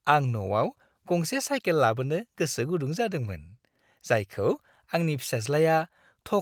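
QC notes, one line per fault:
No faults found.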